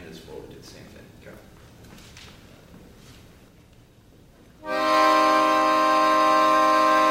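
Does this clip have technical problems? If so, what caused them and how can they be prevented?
No, nothing in this clip stood out as a technical problem on listening, so there is no cause to trace and nothing to prevent.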